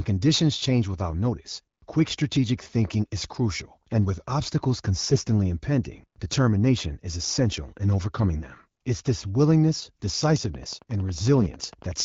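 Between 5.02 and 5.18 s, just after "crucial and with obstacles", the speech turns briefly hoarse, scratchy and gargly but keeps its pitch and level. These are AMR bit errors: flipped, weakly protected bits in the AMR-WB frames misplace excitation pulses and skew fine pitch, gain and spectral values.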